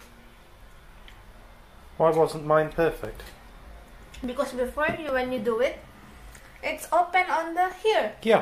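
Five sharp, isolated clicks land at 3.05, 4.24, 5.09, 6.82 and 7.72 s, each consistent with dropped samples. The likely cause is a tiny run of samples, about 0.7 ms' worth, going missing, so the waveform jumps abruptly from one value to a later one instead of continuing smoothly. Nothing audible is removed, but each jump gives a brief tick, seen as a hairline vertical stripe across the whole spectrogram and a small step in the waveform.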